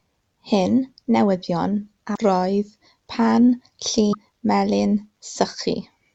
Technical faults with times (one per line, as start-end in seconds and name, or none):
2.13-2.18 damaged data in a compressed stream
4.09-4.15 damaged data in a compressed stream